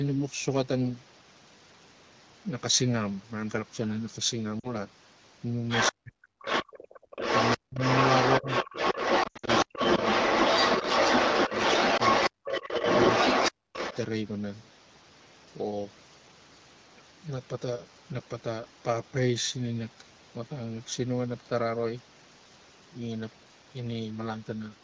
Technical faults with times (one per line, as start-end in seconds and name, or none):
4.60-4.74 lost AMR speech frames
5.68-5.93 other side's voice leaking through
5.91-6.16 speech suppressed in double talk
6.42-13.97 other side's voice leaking through
7.56-7.80 speech suppressed in double talk
8.40-8.48 speech suppressed in double talk
9.23-9.50 lost AMR speech frames
9.64-9.80 speech suppressed in double talk
11.97-12.02 lost AMR speech frames
12.30-12.84 speech suppressed in double talk
13.65-13.76 speech suppressed in double talk